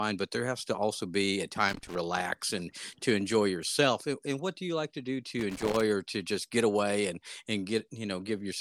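A worn contact making and breaking chops the speech into irregular crackle, a loose connector crackle from 1.68 to 1.97 s after "to also be a" and from 5.39 to 5.81 s before "or to just get".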